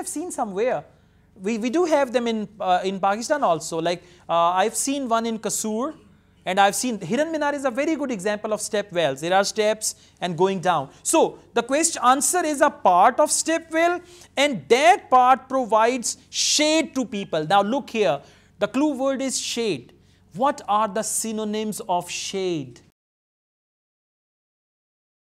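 From 22.90 s to the end at 25.38 s, the fade-out is processed with too few bits and no dither, which fits an 8-bit word length. The result is truncation distortion on a fade: from 23.06 s the tail turns gritty.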